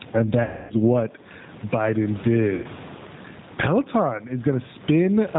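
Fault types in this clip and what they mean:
Gain pumping: The microphone gain was likely set far too high, with a fast limiter clamping it on every loud syllable. The gain swings by around 15 dB, leaving the level squashed and breathing.
G.729 codec: The call was coded with G.729, which rebuilds speech at 8 kbit/s from a vocal tract filter, a pitch predictor and a few pulses per frame. The damage is plainly audible: nothing above 4 kHz, and a rough, slightly synthetic texture throughout.
VoIP packet loss concealed by the speech codec: Packets went missing and the decoder filled the gaps by extending its last pitch and filter at falling gain. About 270 ms is lost from 0.43 s and about 90 ms from 2.55 s, turning into a fading smear that stays weak briefly afterwards.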